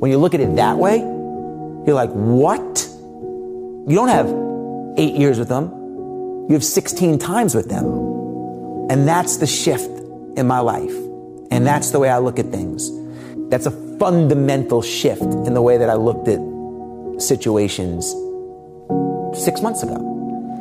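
Nothing is technically wrong with this clip; no faults can be heard anywhere in it.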